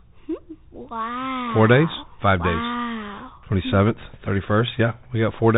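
Throughout the speech, the Bluetooth CVSD headset codec is plainly audible. Its one-bit up-or-down steps, which fit a 64 kbps stream, leave a granular hiss and scratchy s sounds. A spectrogram shows a hard ceiling at 4 kHz, and the waveform carries a grainy noise floor.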